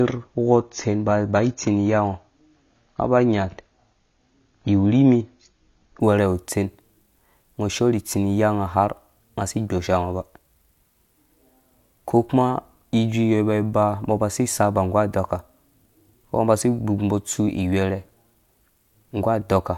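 From the start to 6.0 s the speech plays through an adaptive stream starting at a low bitrate. The sound is dull, with nothing above 7 kHz, and coding artefacts are stronger. That fits a stream around 24 kbit/s. The player began on this cheap rendition to get going quickly, then switched up once it had gauged the connection. At 6.0 s the quality jumps, with no gap, to a fuller sound consistent with roughly 96 kbit/s.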